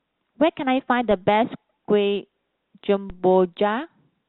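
A DC step at 1.11 s and another at 3.10 s each shift the waveform's zero line abruptly, then let the offset drain away through a high-pass around 20 Hz. Each jump lands as a low thump beneath the speech, which carries on unaffected through the telephone-band G.711 A-law coding.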